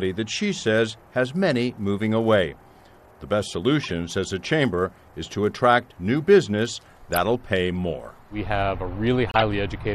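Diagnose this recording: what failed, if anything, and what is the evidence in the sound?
The failure sits at the codec stage: a corrupt frame was decoded and played. Brief chirps and noise bursts break through at 3.83 to 3.90 s, 7.13 to 7.17 s and 9.30 to 9.42 s, each spanning a few frames and growing louder through the clip, with the last peaking near -5 dBFS. Damaged bits gave the decoder wrong gains and codes, so energy landed at false frequencies. A spectrogram shows short, frame-aligned rectangular smears; the waveform shows abrupt spikes.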